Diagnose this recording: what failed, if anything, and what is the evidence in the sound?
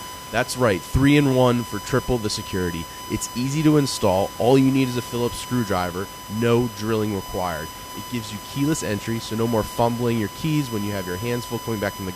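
A USB whine runs through the whole recording, a steady 1 kHz tone sitting roughly 15 dB below the speech and audible in every pause, where the room noise alone would otherwise sit about 3 dB lower. The fault is in the analogue wiring: current drawn by the USB interface in 1 ms frames is leaking into the microphone path through shared power or ground. On a spectrogram it shows as an unbroken horizontal line at 1 kHz from start to finish.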